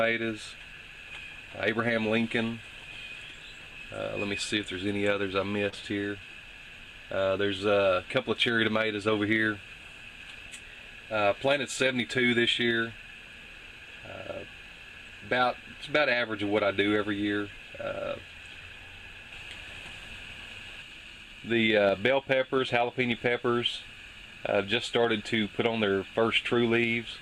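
The audio has one fault: a short concealed packet loss from 5.69 to 5.74 s. About 20 ms of the stream did not reach the decoder in time. The receiver covered the gap with 26 ms of synthetic fill, extending the last sound it had, then blended back into the real signal. The result is a brief smear or wobble at that point, where continued sound stands in for what was lost.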